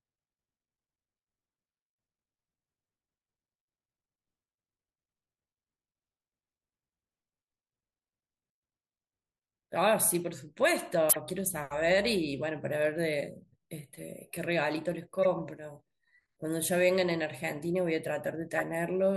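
At 11.09 to 11.17 s, 15.23 to 15.26 s and 18.58 to 18.62 s, the speech has a corrupt frame decoded. A few damaged compressed frames were played anyway each time. Misread codes put energy at wrong frequencies. Each is a brief chirp or noise burst, loudest first.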